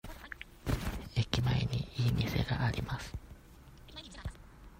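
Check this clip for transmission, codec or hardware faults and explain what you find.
No transmission, codec or hardware faults.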